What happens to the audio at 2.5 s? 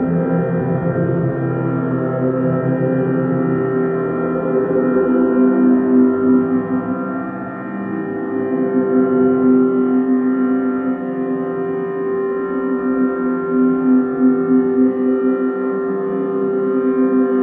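At 2.5 s the sounds carry on intact, with no dropout, click, distortion or other fault at that moment.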